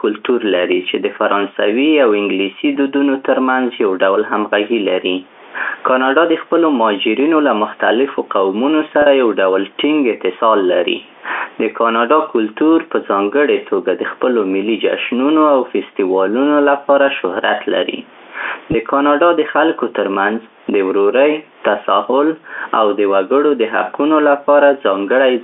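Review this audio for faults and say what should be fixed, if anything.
Gain pumping runs through the whole clip. The gain swings by around 15 dB under loud syllables, likely from excessive input gain driving a fast limiter. Lower the microphone gain so the limiter rarely engages, and slow its release.

Packet loss with pitch repetition occurs at 9.02 to 9.06 s, a 40 ms gap that fits two lost 20 ms packets, and at 18.72 to 18.74 s, a 20 ms gap. The receiver repeats the last pitch period, leaving a brief held, buzzy tone. Use forward error correction or a more stable network path to prevent these gaps.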